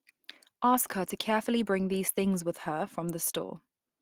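A short speech recording with nothing technically wrong with it.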